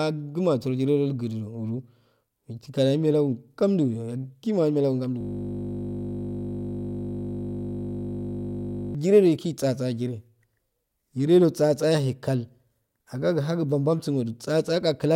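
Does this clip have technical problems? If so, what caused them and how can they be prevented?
Yes. From 5.21 to 8.95 s there is a system hang loop: the system froze while the hardware replayed one 20 ms buffer 187 times, producing a steady 50 Hz buzz. The waveform shows one identical cycle repeating, and a spectrogram shows flat lines every 50 Hz. To prevent it, fix the driver stall and have output mute when the buffer stops refilling.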